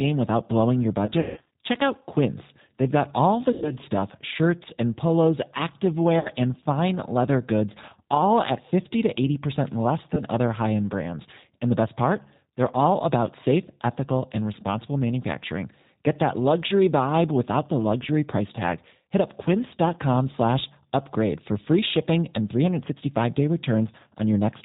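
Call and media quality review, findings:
G.729 codec, whole clip. Speech band-limited. Nothing above 4 kHz. Plainly audible roughness and a synthetic edge, which fits G.729A at 8 kbit/s. Cause: low-rate model-based coding. Each 10 ms frame is rebuilt from a vocal tract filter, a pitch predictor and a few pulses. Fine detail and high band lost.

VoIP packet loss concealed by the speech codec, 1.06 to 1.46 s, after "without blowing your". About 240 ms missing, scattered over 400 ms, longest gap 160 ms. Speech smeared into a fading stretched sound, then weak on recovery. Fits roughly twelve lost 20 ms packets.

Same fault, 3.52 to 3.71 s. About 100 ms missing. Short stretched sound, level drops, slow return.

Same fault, 6.19 to 6.31 s, before "and fine leather goods". About 60 ms missing. Brief stretched smear.

Same fault, 10.15 to 10.23 s, before "other high end brands". About 20 ms missing, one packet. 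Small glitch.

Mechanism, all four. Decoder extends its last pitch and filter and lowers gain frame by frame. State carries over, so distortion lingers after packets resume.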